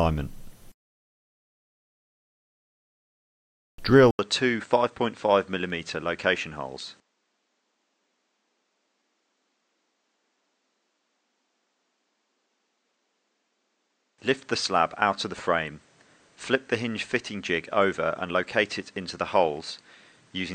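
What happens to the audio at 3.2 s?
Nothing goes wrong at 3.2 s: the audio plays through that moment intact, with no dropout, click or other fault.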